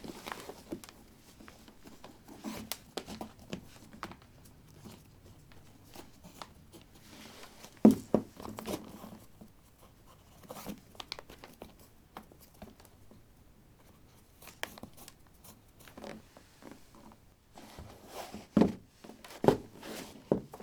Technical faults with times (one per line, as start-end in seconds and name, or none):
none